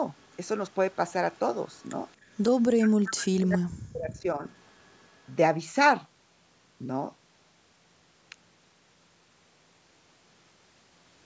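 From 0.19 to 0.37 s, a very faint delayed copy of the speech trails about 275 ms behind. This is likely echo leak, where residual loudspeaker sound passes the echo canceller. It returns at 1.73 to 1.83 s.

From 2.69 to 4.45 s, the speech repeatedly dips very deeply for about 1.5 s in total. This is likely speech suppressed in double talk, with the canceller attenuating overlapping speech.

From 4.64 to 5.32 s, the same faint echo leak reappears, again about 275 ms behind.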